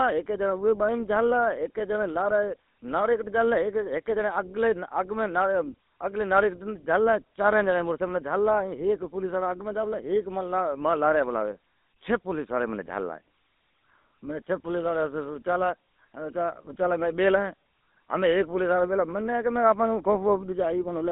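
From start to finish the speech carries the signature of the GSM full-rate codec, at a density that fits a 13 kbps stream. The codec rebuilds the voice from a vocal-tract model excited by a thinned pulse train, which leaves a plainly audible buzzy, gravelly roughness. Plain telephone band-limiting would only muffle the sound. Here the line band runs from 200 Hz to 3.7 kHz, nothing reaches above 3.8 kHz, and that grainy texture rides over every syllable.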